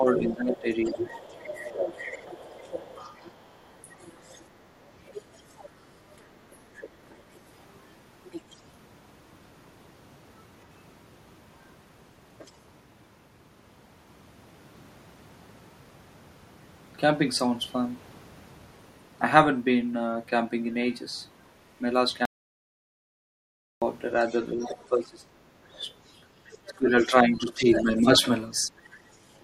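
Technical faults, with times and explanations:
0.00–2.64 s, 3.97–4.04 s, 6.76–6.97 s and 24.53–28.14 s, speech suppressed in double talk: the echo canceller most likely could not tell the talker apart from loudspeaker echo while both sides spoke, so it turned the microphone signal down as a whole. The talker's speech sinks by about 15 dB in the opening stretch and the 6.76 s dip, about 10 dB in the brief 3.97 s dip, and as much as about 25 dB between 24.53 and 28.14 s, where roughly two seconds in total are pulled down.
0.08–7.15 s, 8.31–8.61 s, 12.45–12.52 s and 24.19–29.42 s, other side's voice leaking through: the loudspeaker playback picked up by the microphone was likely not fully cancelled, so a second voice rides under the talker. It sits about 15 dB below the speech through the first seven seconds and at 8.31 s, is only a faint trace about 35 dB down at 12.45 s, and returns about 20 dB down from 24.19 s to the end.
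22.25–23.82 s, audio dropout to silence: the input feed was likely lost, and silence was written in its place for about 1.56 s. The speech cuts off abruptly into silence with no room tone beneath it, then resumes mid-flow. Whatever was said in that gap is missing entirely rather than muffled.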